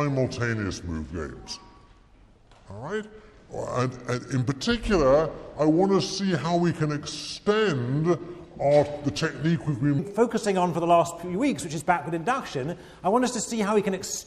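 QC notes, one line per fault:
0.00–9.99 s: section at the wrong speed. Audio runs at 0.724x, pitch drops about five semitones and everything drags; likely played against a mismatched clock.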